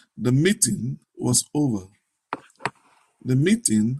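From 0.12 s to 3.99 s, faint ticks recur about every 0.15 s, around thirty in total. These are clock slip clicks. The likely cause is two unsynchronised clocks drifting apart by roughly 150 ppm. Each slip drops or repeats one sample.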